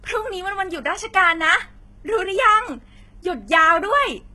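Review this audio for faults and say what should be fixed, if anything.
Likely low-bitrate audio saved at a high bitrate: an earlier lean encode discarded detail that re-encoding cannot restore, leaving nothing above 11.8 kHz throughout the speech. Encode from the original, uncompressed source rather than converting an already compressed file.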